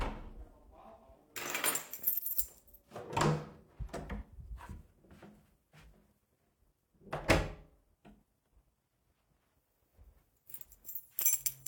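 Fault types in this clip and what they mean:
No technical faults can be heard anywhere in the audio.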